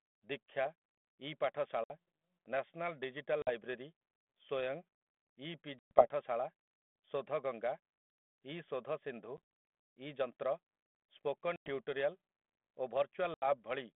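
A speech clip carried over a narrowband G.726 ADPCM link, consistent with 32 kbit/s. Packet loss on an ADPCM call breaks it six times: at 1.84 s, just before "ନ୍ୟାସନାଲ୍ ଡିଜିଟାଲ୍", at 3.42 s, just after "ନ୍ୟାସନାଲ୍ ଡିଜିଟାଲ୍", at 5.79 s, at 9.37 s after "ଇ ଶୋଧସିନ୍ଧୁ", at 11.56 s, and at 13.34 s. Each hole is silent and hard-edged, lasting 50 to 120 ms. At 9.37 s the loss is scattered over 140 ms in short gaps. When audio resumes, the decoder's predictor and step size disagree with the sender's. That causes brief, slight distortion until it resyncs.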